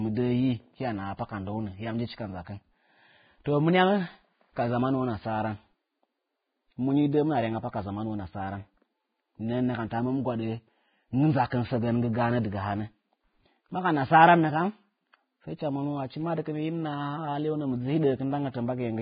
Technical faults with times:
0.00-19.01 Vorbis compression
3.44 pre-echo

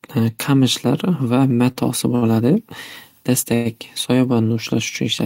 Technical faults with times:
1.71-1.78 short stall from a late packet
2.15-2.32 short stall from a late packet
3.55-3.68 call audio freeze

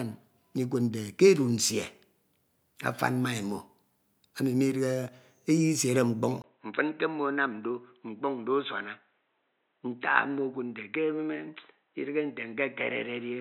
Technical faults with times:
6.42-13.40 input switched to a poorer device

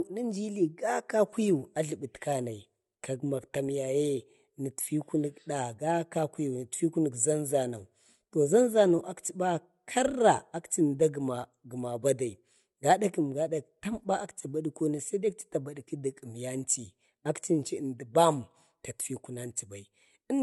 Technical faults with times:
0.00-20.43 low-bitrate audio saved at a high bitrate

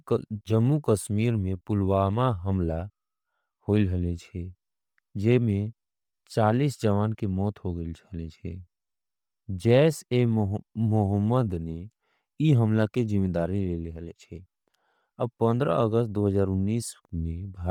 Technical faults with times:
0.00-17.70 Bluetooth LC3 compression

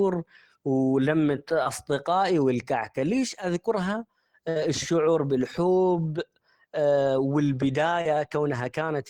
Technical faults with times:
1.63-1.67 short concealed packet loss
4.49-4.57 burst of packet loss
8.01-8.07 short concealed packet loss

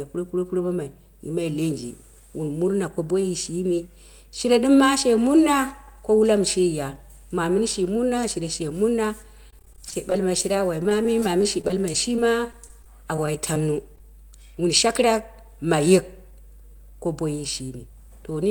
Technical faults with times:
0.00-18.50 mains hum
9.50-10.44 repeated packet loss (robotic sound)
10.83-13.56 scattered short gaps
13.95-13.98 short stall from a late packet
13.98-14.00 short concealed packet loss

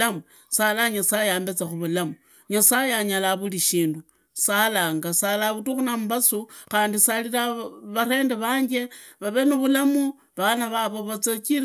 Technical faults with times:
none

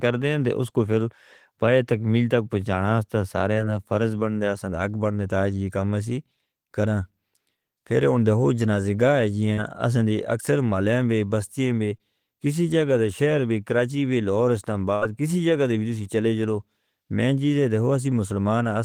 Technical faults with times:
3.53-3.57 short concealed packet loss
9.53-9.59 short concealed packet loss
11.97-12.01 short concealed packet loss
14.95-15.03 burst of packet loss

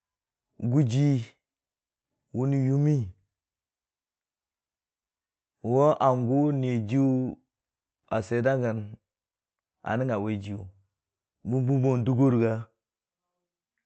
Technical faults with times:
none

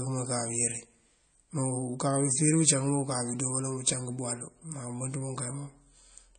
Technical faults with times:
0.00-6.39 MP3 compression

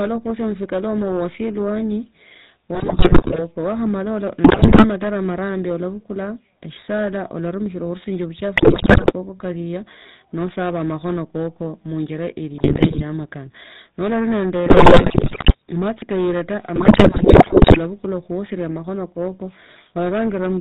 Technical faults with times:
0.00-20.60 hard clipping
0.00-20.60 GSM full-rate codec
2.75-3.40 GSM bit errors
4.44-4.86 GSM bit errors
8.56-9.13 GSM bit errors
12.54-13.03 GSM bit errors
14.66-15.55 GSM bit errors
16.76-17.79 GSM bit errors

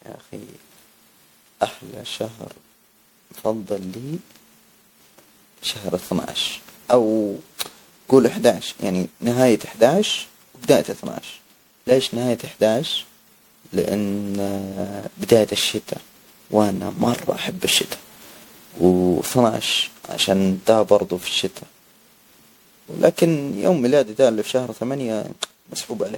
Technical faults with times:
0.00-26.17 generation loss

